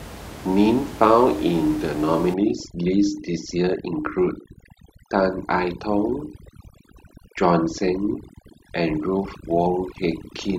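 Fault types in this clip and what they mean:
Overdone noise removal: from 2.34 s on, the background drops and breaks up into twinkling specks, because noise reduction was set too aggressively.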